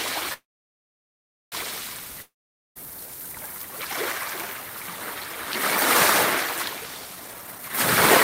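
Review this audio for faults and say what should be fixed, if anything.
Call audio freeze, 0.33 to 1.54 s: the sound stops, a fading buzz gives way to about 1.1 s of silence, then resumes where it left off, likely from delayed packets emptying the jitter buffer.

Long network dropout, 2.22 to 2.77 s: after a brief fading buzz and about 0.47 s of silence, the sound returns further on, with around 0.54 s likely lost in transit.

Jitter buffer speed-up, 7.21 to 7.70 s: the receiver cut short pitch-period pieces repeatedly, running the sound at 166% speed with unchanged pitch and dropping roughly 0.3 s.

To prevent these, stabilise the network path and use a larger adaptive jitter buffer that adjusts delay gradually.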